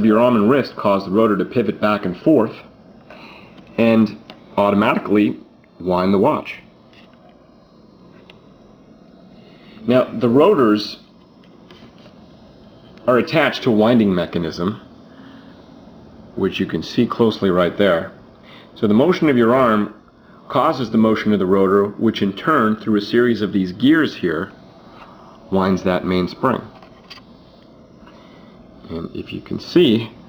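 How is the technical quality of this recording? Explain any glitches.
The recording suffers from sample clock jitter throughout. The converter's clock wanders from one sample to the next, on the order of a couple of microseconds, so each sample is taken slightly early or late. Where the waveform changes fastest, that timing slip becomes an amplitude error, here about 40 dB below the signal. It is heard as a faint hiss or roughness that grows with louder, brighter passages and disappears in silence.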